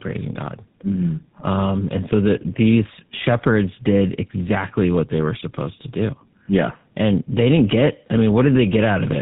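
Tandem speech coding throughout this speech clip: AMR-NB output was coded again as GSM full rate, each coder degrading the last, leaving it rough, warbly and muffled, with nothing above 3.8 kHz.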